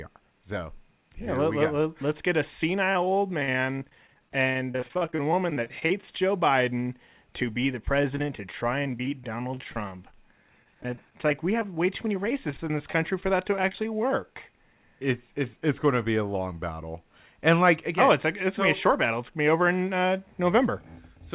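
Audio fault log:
2.93–6.04 s, 7.86–8.39 s, 8.84–10.14 s, 10.64–13.85 s: repeated packet loss (robotic sound), starting after "let get a" and "to be the". Dozens of short dropouts, up to 45 ms, are each patched by extending the previous sound. This concealment covers 10–17% of each span and gives a choppy texture within narrowband audio capped at 4 kHz.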